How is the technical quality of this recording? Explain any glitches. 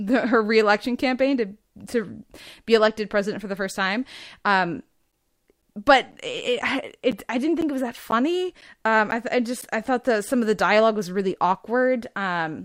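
The recording has one clear glitch in the speech: periodic USB or driver dropouts. From 5.12 to 9.62 s, starting just before "I thought that some", the sound drops out every 0.5 s. There are about ten gaps, each around 10 ms of silence. Something is stalling the USB link or audio driver on a fixed timer. Each stall leaves a tiny hole, heard as a steady tick over the speech.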